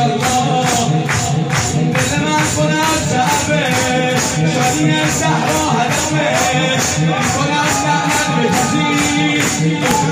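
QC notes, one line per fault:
No faults heard at any point in the clip.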